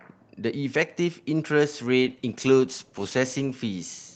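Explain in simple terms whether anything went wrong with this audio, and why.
From 2.02 s to the end the speech sounds rough and muffled. This is a call bitrate drop: the call squeezed the sound into far fewer bits.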